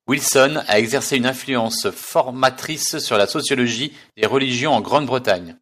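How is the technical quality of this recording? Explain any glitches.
No technical faults are audible anywhere in the recording.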